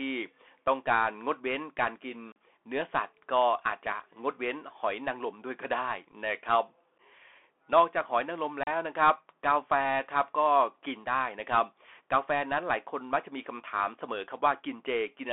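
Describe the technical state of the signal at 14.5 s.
At 14.5 s, as everywhere, it's the Bluetooth CVSD headset codec: one-bit delta coding boxes speech into 300 Hz–3.5 kHz, adding scratchy s sounds and grainy hiss.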